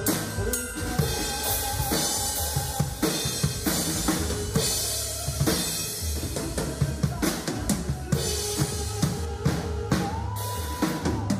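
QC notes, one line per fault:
9.25 to 11.40 s, de-emphasis applied wrongly: a treble-cut filter meant to reverse pre-emphasis acted on audio that never carried any, so the high end rolls off smoothly, about 8 dB down at 10 kHz relative to 1 kHz, leaving the sound dull and muffled.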